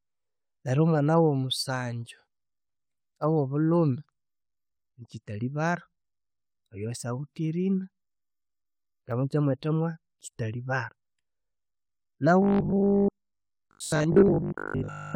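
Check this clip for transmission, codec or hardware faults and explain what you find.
One fault turns up near the end. From 12.42 to 15.14 s there's robotic sound from repeated short buffers, likely because short buffers are repeated when audio arrives too late. The 50 Hz loop points to roughly 20 ms chunks, repeated most of the time, leaving a metallic buzz over the speech.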